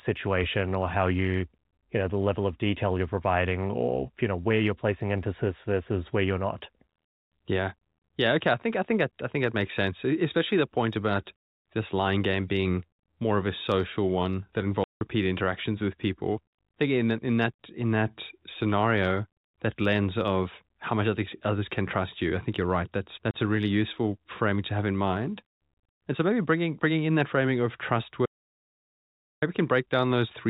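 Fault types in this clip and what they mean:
Packet loss filled with silence: Packets failed to reach the receiver, which played silence in their place. The speech is punched with hard-edged holes: 170 ms at 14.84 s and 30 ms at 23.31 s, lengths that fit 10 ms packets.
Audio dropout to silence: The input signal was likely cut off, by a disconnected device or failed link, while recording carried on writing silence. From 28.26 s to 29.42 s the speech vanishes for 1.16 s into total silence, with no room tone.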